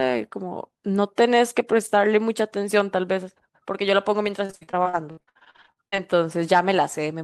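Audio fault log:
4.45–6.00 s, repeated packet loss (robotic sound): the speech turns choppy as short dropouts follow one another in quick succession, none longer than 60 ms. Each hole is papered over by stretching the last fragment of sound, so about 42 percent of this stretch is patched rather than real audio. The unpatched gaps leave audible pieces of speech missing.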